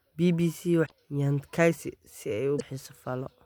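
Speech with two short bursts of damaged data in a compressed stream, at 0.82–0.92 s and 2.55–2.62 s. Each time, corrupted bytes make the decoder misread the frames and lose sync until it finds the next valid frame header, so the speech briefly turns into a garbled chirp or blip. On a spectrogram each burst appears as a vertical smear of energy that breaks the harmonic pattern, and on the waveform as an abrupt, jagged discontinuity.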